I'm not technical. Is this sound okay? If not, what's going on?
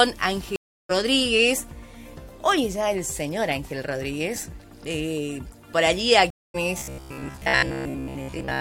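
No. There are two stream reconnects. At 0.56 s and 6.30 s the sound cuts out for about a third and a quarter of a second. The connection dropped and restarted. Playback resumes further on, skipping about 0.4 s and 0.15 s.

From 6.79 s to the end, the sound turns into a flat, metallic buzz. This is robotic sound from repeated short buffers. A 15 ms scrap of audio is replayed over and over, likely because new audio arrives too slowly. That gives a steady 67 Hz hum, and most of the real audio is lost.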